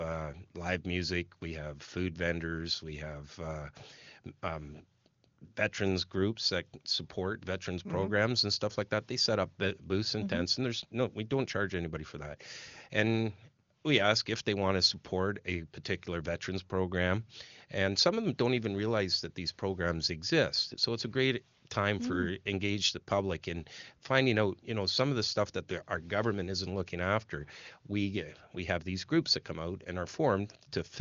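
Nothing technically wrong can be heard in this speech recording. It has passed through the AMR wideband (HD Voice) codec at its top rate of 23.85 kbit/s, which keeps the speech clear and cuts the band off at about 7.3 kHz.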